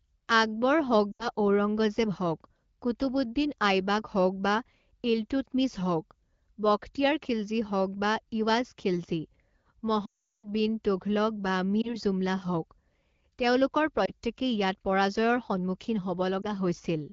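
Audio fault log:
1.12–1.29 s, 10.05–10.49 s, 11.81–11.96 s, 14.05–14.12 s and 16.42–16.46 s, lost AMR speech frames: the three short events, each about 20 ms of loss, are brief dips or warbles. The 80 ms loss at 1.12 s drops to near silence within two frames. The 380 ms run at 10.05 s, which fits about 19 lost 20 ms frames, drops the sound to near silence within two frames, as wideband concealment does, before speech returns weak. Unlike a network dropout filled with silence, the decoder reuses the last good pitch and vocal tract settings, so the sound fades rather than cutting out abruptly. The 12.65 kbit/s AMR wideband coding keeps the speech clear between losses.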